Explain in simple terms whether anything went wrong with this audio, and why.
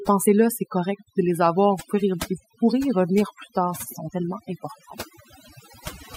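Something did go wrong: overdone noise removal, running through the whole clip. A noise reduction tool was pushed too hard, shutting off frequency bands it mistook for noise, so the background drops and breaks up into twinkling specks.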